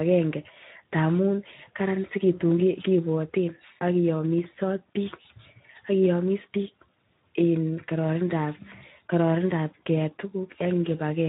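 For the whole clip, the speech has been through the Speex codec at a low quality setting, which leaves its CELP coder too few bits to model the excitation that drives each short frame. The damage is plainly audible from start to finish. Vowels and voiced sounds take on a noisy, hoarse texture. The degree of coarseness fits a Speex setting of roughly 11 kbps.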